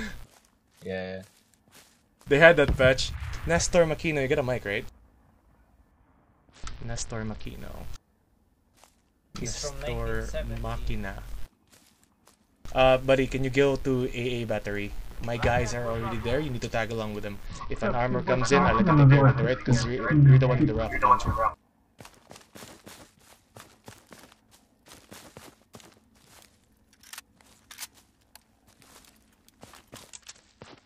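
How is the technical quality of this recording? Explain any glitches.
The recording has three Bluetooth SBC bit pool drops, at 5.91 to 7.45 s, 17.46 to 20.86 s, and 30.13 s to the end. Each time a congested link starved the encoder, which fits a bit pool falling from 31 to 8, near 66 kbps. The top bands go missing and the rest are coarsely quantised, so the treble dulls and gritty noise rises until the rate recovers.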